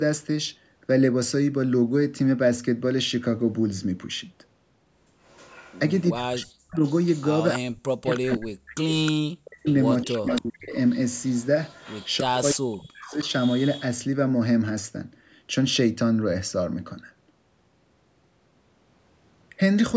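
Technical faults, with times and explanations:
5.27–12.17 s and 13.09–13.83 s, echo leak: a far-end echo canceller likely let loudspeaker pickup through, so a copy of the speech returns 312 ms late, about 15 dB below the direct speech in the first stretch and about 20 dB below in the second, sounding like a trailing double.
6.13–10.74 s and 12.21–13.26 s, speech suppressed in double talk: the echo canceller likely mistook overlapping talk for echo and attenuated it, so the speech repeatedly dips by up to about 40 dB, affecting roughly three seconds in total, then about one more second.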